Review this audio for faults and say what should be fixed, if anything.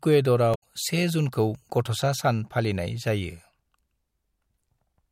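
There's damaged data in the compressed stream around 0.51 to 0.63 s: corrupt bytes knock the decoder out of sync, giving a brief chirp, squawk, click or short hole. Worth checksumming files in transfer and storage.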